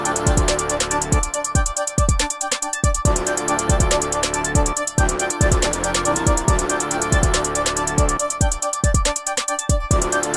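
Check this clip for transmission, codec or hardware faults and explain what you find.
Nothing here stands out as a problem; the audio runs along steadily with nothing that points to trouble in the transmission, the encoding or the equipment.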